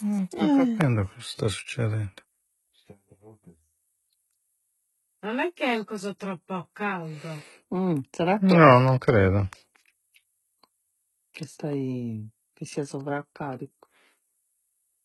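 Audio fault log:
Throughout, HE-AAC compression, likely cause of the heavy damage. The speech has a coarse, metallic treble and gritty s sounds. Nothing is heard above about 11.8 kHz. The upper band seems rebuilt from copied lower bands, which fits a bitrate near 16 kbps.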